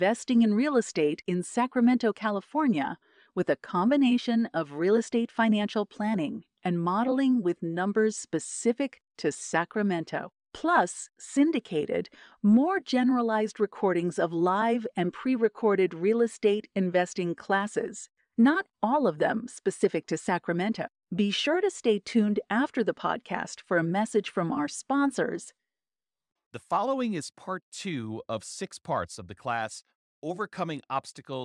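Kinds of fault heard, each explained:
No technical faults can be heard in this recording.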